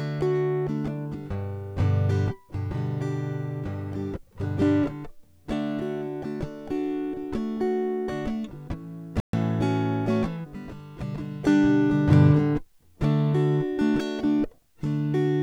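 At 9.20 s the music cuts to silence for about 132 ms, a playback stall, likely the player starving for data; waveform and spectrogram show a blank gap.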